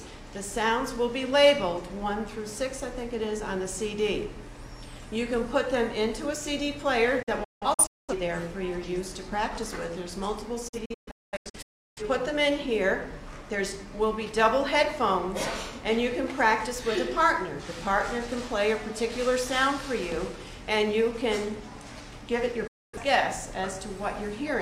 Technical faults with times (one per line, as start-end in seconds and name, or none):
7.22-8.13 digital broadcast dropout
10.68-12.02 digital broadcast dropout
22.67-22.99 digital broadcast dropout